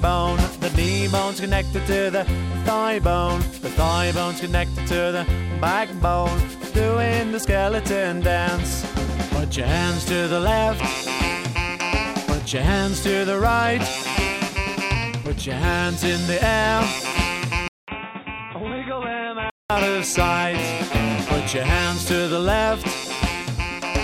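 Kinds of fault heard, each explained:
Input switched to a poorer device: a 200 ms gap at 17.68 s, then duller, quieter, noisier sound cut above 3.8 kHz until 19.70 s, likely a microphone change.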